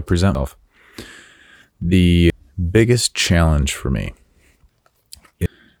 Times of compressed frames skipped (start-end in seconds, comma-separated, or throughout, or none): 0.35, 2.30, 5.46